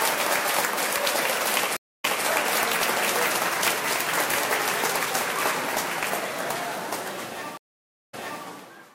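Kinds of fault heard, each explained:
Stream reconnect: the connection broke, playback went silent, and a fresh decoder picked the stream up again mid-flow. The server resent a short burst, so the sound restarts slightly behind where it stopped. This happens twice: at 1.77–2.25 s, with 270 ms of silence and a 209 ms repeat, and at 7.57–8.44 s, with 554 ms of silence and a 313 ms repeat. Unlike a plain dropout, which simply loses audio, each gap is followed by a replay of what came just before it.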